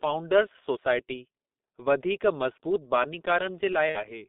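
From the start, the whole recording runs through the G.723.1 codec, and it's heavily damaged. The line only passes about 200 Hz to 3.7 kHz, and the coding rate sounds like roughly 6 kbit/s. That leaves the speech muffled and hoarse, with consonants smeared because the voice model updates slowly.

Then from 3.89 to 3.99 s there's VoIP packet loss concealed by the speech codec. About 60 ms went missing, which fits two lost 30 ms frames. The decoder filled the gap by stretching its last pitch and filter into a buzzy tone or coloured noise that fades, and the voice stays weak or distorted just afterward.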